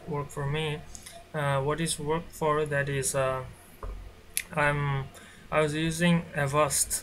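No technical faults can be heard anywhere in the signal; level, continuity and timing hold steady throughout.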